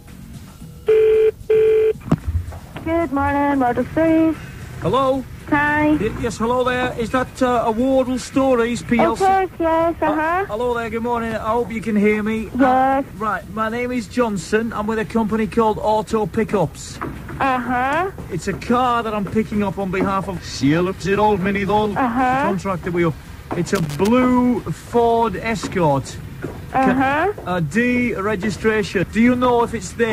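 Loose connector crackle breaks into the audio from 23.75 to 24.08 s, as a worn contact rapidly makes and breaks the signal, showing irregular waveform dropouts and broadband vertical streaks.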